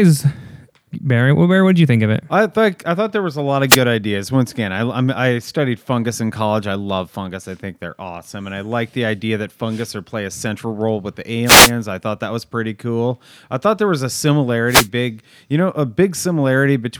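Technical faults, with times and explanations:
3.68–3.78 s, 11.45–11.72 s and 14.67–14.88 s, wireless microphone noise hit: the analogue FM radio link from the microphone fades as reflected signals cancel the direct one, so the receiver's own noise rises over the weakened carrier and masks the speech. Each fade comes through as a brief swish of static: the first, just after "there was a lot", lasts about 0.1 s; the second falls between "central role with the" and "I thought that was"; the third falls between "thought there was a" and "you know a".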